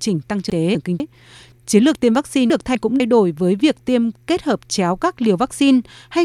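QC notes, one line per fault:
0.5–1.0 s and 2.5–3.0 s, chunks out of order: a jumbled, garbled moment, as a 250 ms chunk arrives one chunk late, leaving three hard joins each time.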